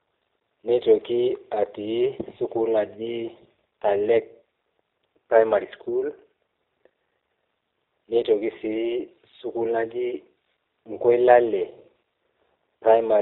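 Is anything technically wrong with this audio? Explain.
Yes, two things. The whole clip, which is speech, has been through the G.729 codec, and there's a short dropout near the end.

G.729 runs throughout. It doesn't store the waveform. It rebuilds each 10 ms frame from a vocal tract filter, a pitch predictor and a handful of pulses, and the rough, slightly synthetic texture points to something like 8 kbit/s. The damage is plainly audible: the speech has that rough, artificial edge, and nothing above 4 kHz comes through, so it sounds dull and telephone-like.

VoIP packet loss concealed by the speech codec happens from 12.15 to 12.17 s, a single 20 ms gap. With no data for that stretch, the decoder keeps going on its last pitch and filter settings and pulls the gain down as it goes. You hear a brief smeared buzz or dip instead of a clean cut, and since each frame builds on the one before, the speech stays weak or distorted for a moment after the data returns.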